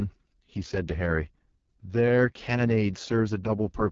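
AMR wideband (HD Voice) codec damage runs through the whole of this speech clip. The sound is heavily degraded, rough and raspy, and nothing is present above about 7.5 kHz. That raspiness points to the codec's lowest mode, around 6.6 kbit/s. At that rate the pulse-driven vocal tract model has too few bits to track the voice below 6.4 kHz, and the band from 6.4 to 7 kHz is only synthetic shaped noise.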